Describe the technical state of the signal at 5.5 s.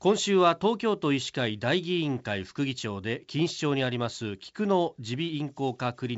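At 5.5 s the speech is intact, carried cleanly through G.722 wideband telephone coding at 64 kbit/s, with nothing heard above about 7.7 kHz and at most a faint coding hiss.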